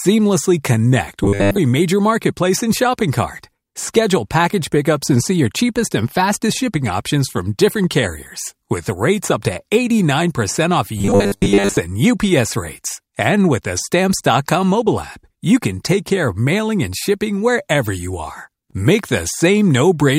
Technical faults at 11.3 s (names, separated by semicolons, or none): robotic sound from repeated short buffers